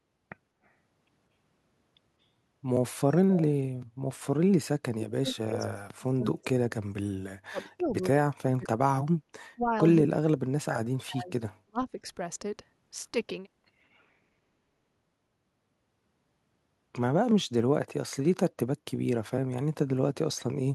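From 4.57 to 11.8 s the talker keeps dipping away, at 4.57, 7.49, 8.16, 9.55 and 10.03 s, dropping as much as roughly 40 dB: likely speech suppressed in double talk, the echo canceller turning the talker down along with the loudspeaker echo while both sides talk.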